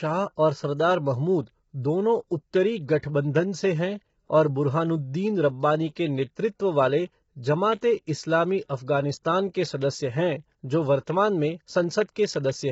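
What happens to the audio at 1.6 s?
At 1.6 s, as throughout the clip, the speech sounds rough and grainy, with noise filling the gaps between pitch harmonics and nothing above 7.8 kHz. This is likely heavy low-delay AAC compression (AAC-ELD), consistent with about 16 kbps. Its short frames smear harmonics steadily, unlike packet loss, which causes brief dropouts.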